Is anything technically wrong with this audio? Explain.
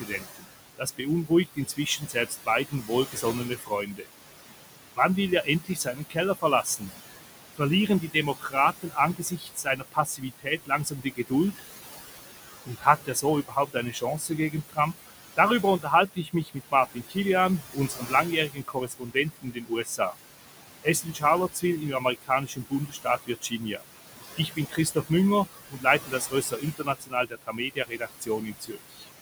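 Yes. Noise suppressor artifacts run through the whole clip. The suppressor estimates the steady room noise, which sits about 11 dB below the speech, and pulls down every band it judges to be noise, frame by frame, by about 16 dB. Because that gain shifts constantly, the background sinks in the gaps and swells back under each phrase.

The suppressor also cuts speech. It misreads some of the speech as noise and lowers it along with the background, by as much as about 18 dB. This happens within 0.0–4.06 s, 4.95–6.91 s, 7.54–11.65 s, 12.48–20.15 s, 20.83–23.83 s and 24.37–29.06 s. Inside each span only scattered fragments are hit, from roughly half a second to about two seconds in total per span. There, soft consonants, word endings and quieter stretches sound swallowed or suddenly faint.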